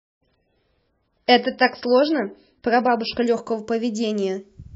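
A speech clip that opens on an adaptive stream starting at a low bitrate. From 0.0 to 3.26 s the sound is dull and smeared. Nothing is heard above 5.6 kHz, and codec artefacts are strong. The player began on a cheap version of the stream to start quickly, which fits MP3 at around 16 kbit/s. At 3.26 s it switches up, which fits 128 kbit/s. The treble returns at once, with no gap.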